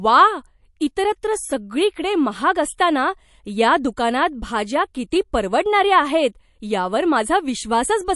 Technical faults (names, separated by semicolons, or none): MP3 compression